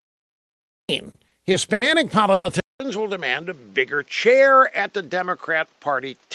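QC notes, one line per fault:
0.00–0.89 s, cut-off start: The audio begins in digital silence and the sound enters abruptly at 0.89 s, already in progress, with no attack or fade-in. The capture or stream evidently started late and clipped off the beginning of the utterance.
1.11–1.83 s, repeated stalls (stutter): Four short holds break up this stretch, about 160 ms of filler in all, the longest 80 ms, covering roughly 22% of the span. Packets arrived late repeatedly, so the receiver stretched the last sound each time. Nothing is lost, but delivery drags and stutters.
2.33–2.46 s, call audio freeze: The sound hangs for about 110 ms as a fading continuation of the previous sound, ending in roughly 20 ms of silence, then resumes where it stopped. This is likely a jitter-buffer underrun from delayed packets. Total delay grows by 110 ms, with nothing missing.
2.60 s to the end, input switched to a poorer device: After a 200 ms silence at 2.60 s, the sound turns duller and narrower in band, whereas the call codec's band earlier reaches 12 kHz. 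Level drops by around 5 dB, and a new noise floor sits roughly 40 dB down. The likely cause is a change of input to a lower-grade microphone or headset call profile.
3.41–4.61 s, jitter buffer slow-down: Playback runs at about 94% speed with pitch unchanged, adding 84 ms as sounds are drawn out. The receiver was repeating pitch periods and pause fragments to rebuild its buffer reserve, which gives a slightly stretched quality.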